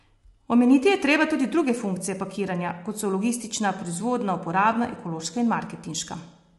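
From start to end the speech sounds rough and grainy, with noise filling the gaps between pitch harmonics, likely from low-delay AAC compression (AAC-ELD) at a rate fitting around 32 kbps. A spectrogram shows noise between the harmonic lines and nothing above 11.6 kHz.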